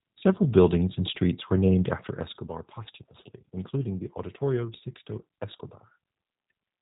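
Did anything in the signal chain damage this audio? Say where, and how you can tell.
Yes. The damage sits at the codec stage and runs through the whole speech clip. This is G.729 coding, the narrowband VoIP codec. Nothing survives above about 3.8 kHz, so the top end is simply gone. The voice sounds rough and slightly synthetic, and the coding damage is plainly audible. The codec rebuilds speech from a vocal tract filter, a pitch predictor and a few pulses per short frame. That leaves a thin, buzzy texture, which fits an 8 kbit/s stream.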